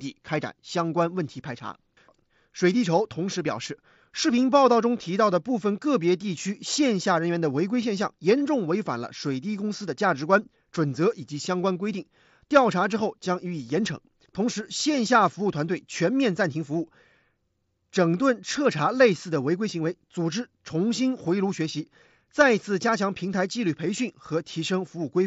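No technical faults detected.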